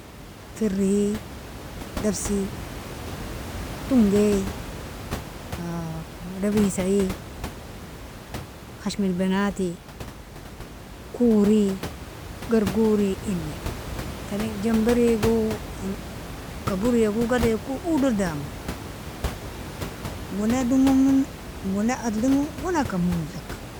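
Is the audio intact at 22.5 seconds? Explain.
Yes, the audio is intact at 22.5 seconds, with only the room's own background noise sitting about 12 dB below the speech.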